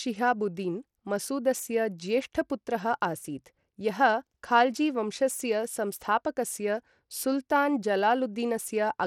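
A speech recording carries Bluetooth SBC compression damage from start to finish, plainly audible as a gritty, coarse texture with unsteady treble, most likely from an SBC link at a low setting that fits about 96 kbps. The codec's few sub-bands get too few bits, so the highest ones starve and the rest are roughly quantised. A spectrogram would show a hard ceiling at 17.4 kHz and patchy, flickering energy in the upper bands.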